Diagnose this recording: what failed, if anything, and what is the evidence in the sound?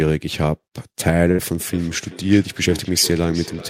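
Network: a burst of packet loss at 1.31–1.41 s; concealment stretches the last sound, seen as smeared, fading harmonics, then audio resumes with 40 ms missing.

Call processing: feedback echo between two devices from 1.73 s, sounds recurring roughly every 0.4 s, about 15 dB down, seen as faint repeated copies.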